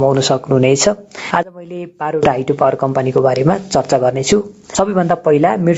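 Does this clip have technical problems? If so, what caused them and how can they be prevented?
Yes. Throughout the clip there is gain pumping, with the level swinging by around 20 dB. The likely cause is input gain set far too high, so a fast limiter clamps every peak and squashes loud and soft parts together. Unlike a slow automatic gain drift, the ducking follows each loud sound instantly. Lowering the input gain until the limiter stops acting prevents it.

From 1.43 to 2.23 s there is one channel inverted: the sound suddenly drops by about 22 dB, leaving only what differs between left and right. The likely cause is a polarity-reversed channel summed to mono, so the centred content cancels. A plain dropout would go silent, and a level fade would keep the full tone. This residue is a faint copy instead. Checking channel polarity and mono compatibility before summing prevents it. The call microphone processing, with nothing above 8 kHz, is not part of the problem.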